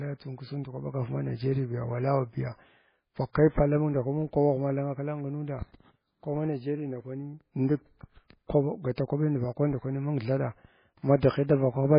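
Throughout, the speech has nothing above 5 kHz and sounds watery and swirly, with weak detail flickering in and out between frames. This is heavy damage from what is likely MP3 compression at a very low bitrate, around 16 kbps. The fixed treble ceiling and swirling set it apart from plain low-pass filtering, which would sound dull but steady.

From 8.95 to 8.98 s there is pre-echo. A brief hiss of about 24 ms arrives just before a sharp attack, which then lands soft and smeared. The codec spread the attack's noise across the quiet stretch before it. Unlike a click or dropout, this hiss comes ahead of the attack.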